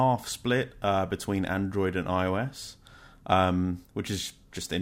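No technical faults can be heard anywhere in the speech, so there is nothing to describe in time order.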